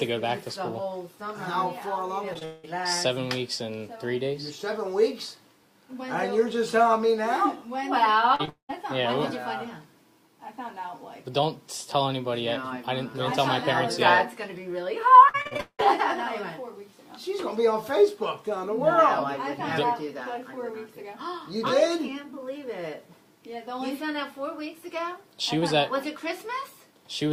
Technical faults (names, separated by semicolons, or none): short concealed packet loss; long network dropout; repeated packet loss (robotic sound)